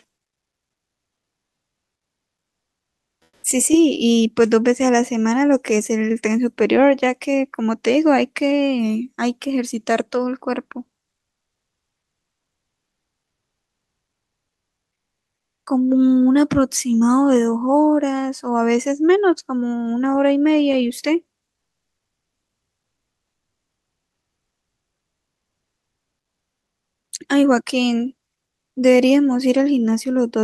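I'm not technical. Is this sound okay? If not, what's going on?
No. From 11.15 to 15.63 s, the room sound in the pause turns into a flat, quieter hiss: comfort noise in place of the background, likely because the sender paused transmission during silence.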